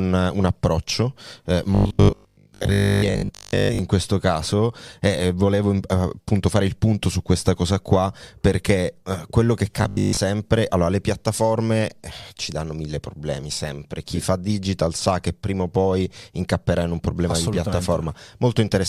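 From 1.75 to 3.79 s, after "approccio eh", and from 9.83 to 10.19 s, after "perché eh quello che", speech becomes a rigid metallic 50 Hz buzz: robotic sound from repeated short buffers, likely a 20 ms chunk replayed while most real audio is skipped. Unlike steady hum, it tracks the speech only loosely.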